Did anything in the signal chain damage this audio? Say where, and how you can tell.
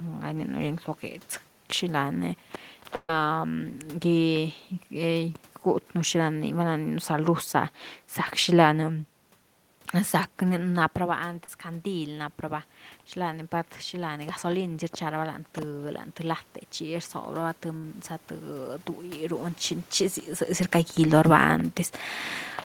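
Yes. At the network stage, a burst of packet loss at 2.95 to 3.10 s drops about 140 ms. It is held over, fades, then briefly goes silent. Another burst at 17.77 to 17.84 s loses about 60 ms.

In call processing, automatic gain rising from 11.19 to 19.45 s lifts the level about 7 dB after the input fell about 10 dB. Voice and room noise swell together.

Also at the network stage, a short concealed packet loss at 11.45 s fills about 30 ms by continuing the previous sound. It comes through as a quick smear before the real audio returns.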